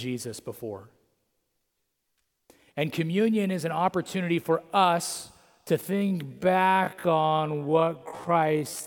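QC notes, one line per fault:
5.87–8.87 s, time-stretched section: directly after "opportunity for us to" the pace abruptly drops to half speed and stays there to the end of the clip, while the pitch holds steady. The slowed portion drags. The likely cause is software lengthening this stretch to fill a target duration, keeping pitch by repeating short overlapping pieces of the signal.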